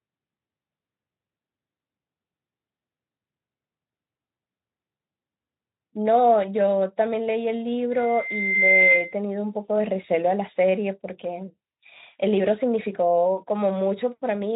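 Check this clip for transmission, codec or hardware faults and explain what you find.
One hardware fault stands out against the Speex-coded speech, whose band stops near 3.8 kHz. From 7.91 to 9.18 s, loudspeaker feedback squeal: the microphone re-captures its own speaker, a 2.1 kHz tone swells over roughly 0.7 s to about 10 dB above the speech, drawn on a spectrogram as a bright horizontal line.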